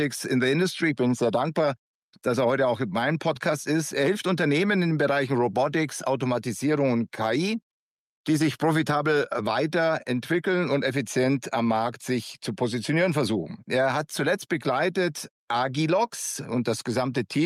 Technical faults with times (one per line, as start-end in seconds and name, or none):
0.00-17.46 gain pumping